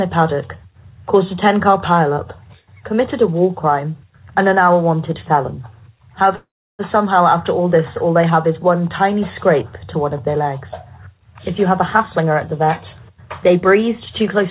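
Call audio freeze, from 6.36 to 6.81 s: the sound stops moving forward, with the last moment stretched briefly into a fading buzz and then about 320 ms of silence, roughly 430 ms of stalled audio in all. When the sound resumes, it picks up exactly where it left off, with nothing skipped. The stream is simply pushed later. This likely comes from packets held up in transit until the jitter buffer drained and had nothing to play.

Jitter buffer speed-up, from 12.23 to 14.46 s: the sound runs at about 104% speed without any change in pitch. Over this stretch the receiver trims many tiny pieces, each one or a few pitch cycles long, removing roughly a tenth of a second in total. That shortens the backlog of buffered delay. Throughout, the audio has no content above 4 kHz, which fits a G.711 A-law call codec at 64 kbps.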